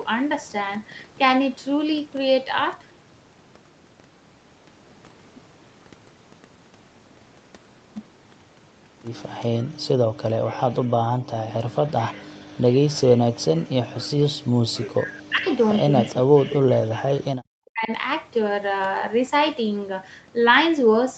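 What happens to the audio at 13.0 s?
From 12.88 to 13.02 s there is a brief echo leak: a faint, delayed copy of earlier speech, arriving about 422 ms behind the original and sitting well below the main speech level. It sounds like a short ghost of what was just said. The likely cause is a loudspeaker at the far end whose echo canceller failed to fully suppress the sound its microphone picked up, so a residue was sent back down the call.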